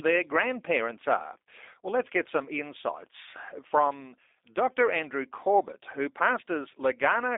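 From start to finish the speech carries G.729 codec damage, plainly audible. The codec rebuilds each 10 ms frame from a vocal tract filter, a pitch predictor and a few pulses. Nothing above 3.7 kHz survives, and the low end starts near 300 Hz. The result sounds thin, rough and slightly synthetic.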